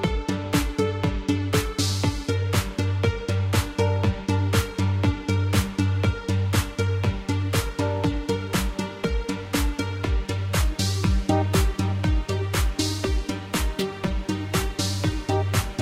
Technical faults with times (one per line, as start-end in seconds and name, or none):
none